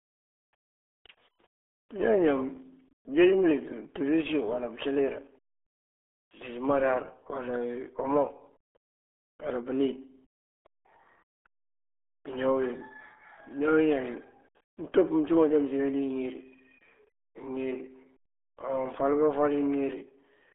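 Speech squeezed through the RealAudio 14.4 codec for the whole clip: nothing above 3.8 kHz, heavy gargly smearing, consistent with an 8 kbit/s dial-up stream.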